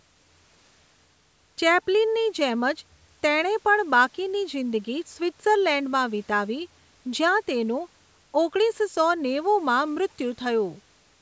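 No technical faults can be heard in this speech.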